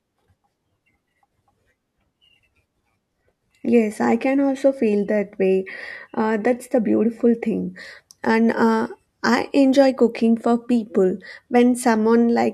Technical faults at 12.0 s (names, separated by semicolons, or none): none